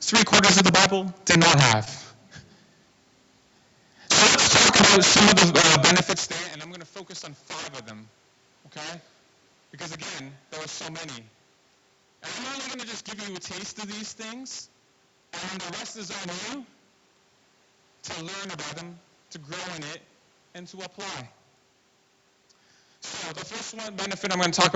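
From the start and all the way through, the speech carries integer overflow. Peaks driven about 20 dB past the limit wrap to the opposite sign instead of flattening. Around 7 percent of samples flip across the full range, giving violent cracks on loud syllables, far harsher than clipping's flattened buzz.

At 1.85 s, right after "did not have", a short concealed packet loss occurs. About 20 ms of audio never arrived, which fits one lost call frame, and the receiver extended the preceding sound for roughly 11 ms before blending back by 1.88 s. It is heard as a brief smear rather than the hard silent gap of a dropout.

At 5.62 s the same happens between "about some of the" and "benefits there and I'm". Again 20 ms is missing and synthesised continuation covers it until 5.65 s, leaving a short wobble that is distinct from the wrap-around cracks.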